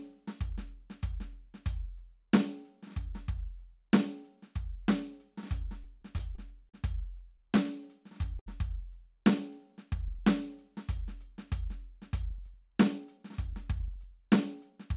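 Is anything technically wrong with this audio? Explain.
Yes. This music clip has four playback-timing faults. It also passed through a call path with nothing above 4 kHz, which fits G.711 mu-law at 64 kbps.

From 5.84 to 6.75 s there are repeated stalls (stutter). Packets kept arriving late, so the jitter buffer emptied five times. The receiver filled 92 ms in total, with the longest gap 40 ms, by continuing the last sound. Nothing is lost, but the music drags and stutters.

From 8.39 to 8.48 s there is a short stall from a late packet. One packet missed its playout time, and the receiver stretched the preceding sound for 70 ms until it arrived. A single moment of the music hangs on slightly too long before resuming.

From 9.51 to 10.25 s there is a jitter buffer slow-down. Its reserve was low, so the receiver repeated small pitch-period slices, adding 44 ms. Playback runs at 95% speed with unchanged pitch, and the music briefly sags in tempo.

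From 12.23 to 14.94 s there is a jitter buffer speed-up. The buffer held excess audio, so the receiver trimmed short pitch-period pieces, about 150 ms altogether. The music runs at 105% speed at the same pitch, sounding hurried and losing its steady tempo.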